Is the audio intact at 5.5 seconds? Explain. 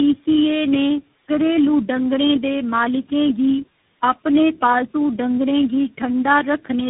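No, at 5.5 seconds the speech sounds rough, muffled and warbly, with nothing above 3.8 kHz, from tandem speech coding: four speech codecs in a row, ending in CVSD.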